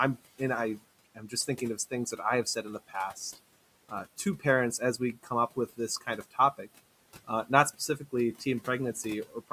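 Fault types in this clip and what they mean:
Speech cut by the noise suppressor, at 1.15, 2.45, 3.89, 4.98 and 6.23 s: the suppressor mistakes brief parts of the speech for background noise and pulls them down with it, by up to about 16 dB, leaving them swallowed and faint.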